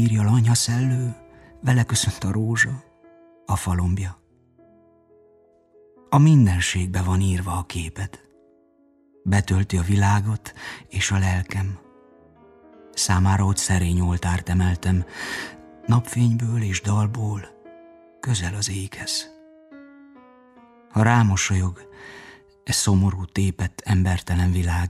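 No technical faults can be heard at any point in the audio.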